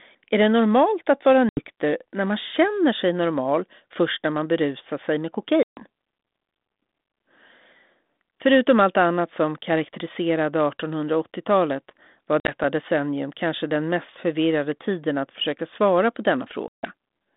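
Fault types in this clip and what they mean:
Packet loss on an ADPCM call: silent gaps at 1.49, 5.63, 12.4 and 16.68 s; the decoder's predictor slips, so speech returns slightly distorted.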